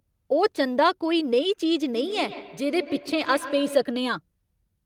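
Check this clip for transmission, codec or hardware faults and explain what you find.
There is a feedback echo between two devices from 1.92 to 3.94 s. A second device's microphone recaptures what the other plays, so its canceller misses it. Each sound returns roughly every 150 ms, peaking about 14 dB below the speech.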